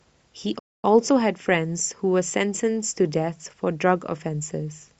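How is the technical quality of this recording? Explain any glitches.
There's one clear glitch in the speech: a playback stall from about 0.59 s to 0.85 s. The sound cuts to silence mid-flow for roughly 240 ms, then carries on. The likely cause is the player running dry of buffered data, or its audio thread getting blocked, until it recovers.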